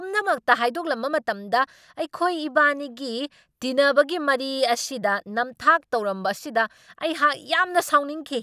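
A speech recording, and nothing is technically wrong with it.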